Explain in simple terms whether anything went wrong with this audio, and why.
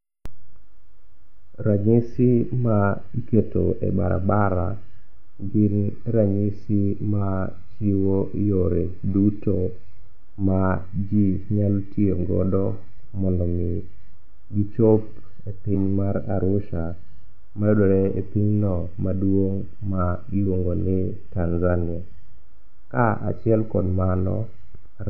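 Around 15.70 to 15.74 s the speech hits a quick glitch from damaged data in a compressed stream: some of the data got corrupted, so the decoder stumbles before finding its place again.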